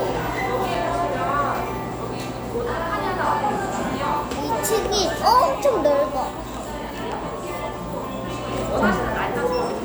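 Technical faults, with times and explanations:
0.75 s, block of digital silence: a 5.8 ms run of output, which fits a 256-sample block, dropped to zeros, and the abrupt edges produce a brief tick.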